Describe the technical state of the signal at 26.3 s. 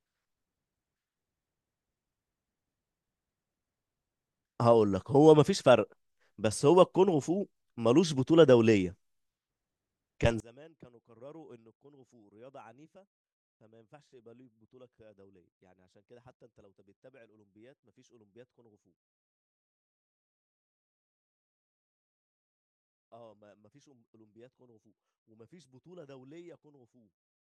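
One channel inverted, from 10.40 s to 27.47 s: the speech drops by about 31 dB in mono, likely because reversed polarity cancels the centred content shared by both channels.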